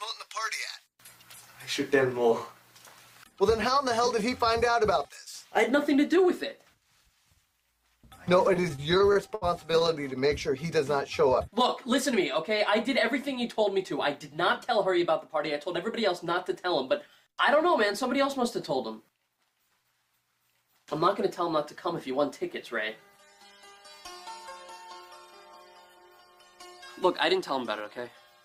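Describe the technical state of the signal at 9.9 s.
At 9.9 s the audio is in the final moments of repeated stalls (stutter) running from 8.47 to 9.98 s: sixteen brief gaps, the longest 70 ms, where the jitter buffer ran dry and the last sound was stretched. Unlike packet-loss dropouts, nothing is missing; the sound just drags and hiccups.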